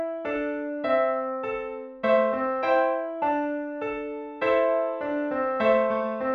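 No technical faults can be heard at any point in the signal.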